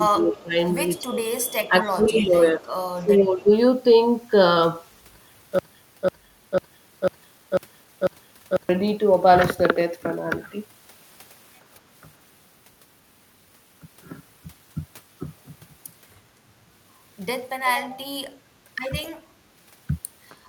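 A speech recording with two related call-path faults. From 0.09 to 3.49 s the voice dips in and out, losing level for about two seconds in total, at worst by about 15 dB. The same happens briefly at 19.05 to 19.13 s, with a sharper drop of about 20 dB. This is likely speech suppressed in double talk. Both sides seem to talk at once, and the echo canceller turns the near talker down along with the echo it is fighting. An echo leak is also audible: a faint copy of the voice trailing it by 263 ms. It appears at 0.96 to 1.53 s and 2.17 to 2.71 s, then in short scraps at 19.02 s and 20.29 s. The copy sits roughly 20 to 35 dB below the voice, loudest in the second stretch. It is likely loudspeaker pickup on the far end that its echo canceller did not fully remove.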